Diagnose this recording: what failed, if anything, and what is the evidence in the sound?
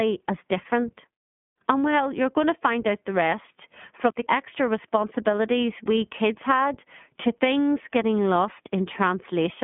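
The codec stage failed: iLBC coding runs through the whole speech clip. Nothing sits above 3.6 kHz, the line band spans roughly 150 Hz to 3.4 kHz, and the plainly audible rough, synthetic texture, which fits iLBC's 20 ms frame mode at 15.2 kbps, rules out plain telephone filtering.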